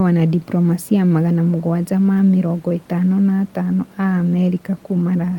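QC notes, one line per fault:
No faults found in this clip.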